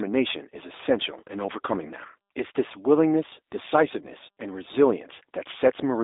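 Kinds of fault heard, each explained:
G.729 codec: The whole clip sounds like it's been through a low-rate VoIP speech codec, which fits G.729 at about 8 kbit/s. Rather than storing the waveform, the codec rebuilds the speech from a vocal tract filter, a pitch predictor and a few pulses per frame. That leaves the voice clearly rough and a bit synthetic, with phone-line bandwidth of roughly 300 Hz to 3.7 kHz and nothing at all above 3.8 kHz.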